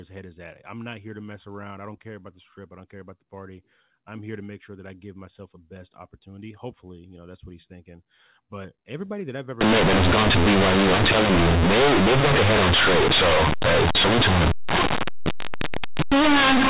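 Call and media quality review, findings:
Loud buzzy distortion, heavy noise in pauses, 9.61 s to end. Companded audio read as linear: A-law bytes played as raw 8-bit samples, unexpanded.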